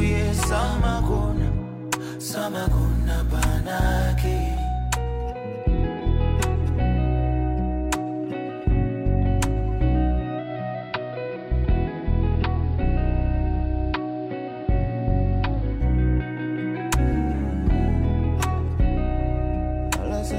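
Digital radio blending to analogue, 10.38 to 15.86 s: the digital signal dropped, so a 142 ms cross-fade switched to AM, which adds faint hiss.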